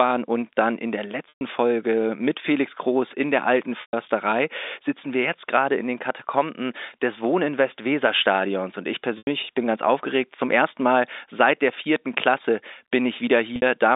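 Packet loss with pitch repetition hits the speech four times: 1.29 to 1.41 s and 3.81 to 3.93 s (120 ms each), 9.18 to 9.27 s (90 ms), and 13.56 to 13.62 s, where 60 ms goes missing in a single run within a stretch of about 180 ms. The receiver fills each gap by looping the last pitch period, so the sound briefly holds on a buzzy, frozen tone, fading toward silence in the longer gaps, before the G.711 telephone-band audio cross-fades back.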